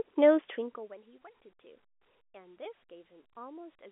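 A speech recording heard through a telephone-band line, with nothing above about 3.7 kHz, consistent with G.711 A-law coding. From 0.38 to 1.00 s there is zipper noise. The level drops by roughly 25 dB in coarse 1 dB steps, about forty per second, with no smoothing between them, so each jump leaves a tiny click and the fade sounds like a fine ticking. On a waveform the envelope descends as a staircase. A spectrogram shows faint vertical broadband lines at each step.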